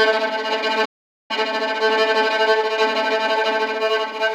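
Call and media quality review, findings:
Playback stall, 0.85 to 1.31 s. Output drops to full silence mid-flow for 443 ms, then the sound resumes. Component: playback path on the player side, likely a starved output buffer or a blocked audio thread that stopped delivering samples until it recovered. Not a fade or masking effect: the gap is hard silence bounded by abrupt stop and restart.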